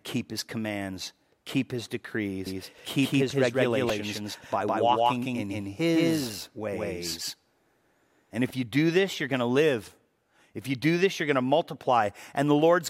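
A speech clip in which, from 2.46 s to 8.50 s (starting just after "his commands keep his" and ending just before "you do this you're"), every syllable is followed by a flat, full-band second copy at about the same level, roughly 150 ms behind, with no room colour or decay. It snaps in and out abruptly at both ends. This is a doubled audio track, most likely the same signal captured a second time through a slower path and mixed back in out of step with the original. Inside that stretch, at 3.89 s, there is a tiny click-like buzz. This is a repeated buffer: a piece of about 3 ms, which fits a 128-sample buffer, plays three times in a row with hard joins. It happens because fresh audio arrived late, so the device replayed the last buffer twice and a few milliseconds of sound were lost.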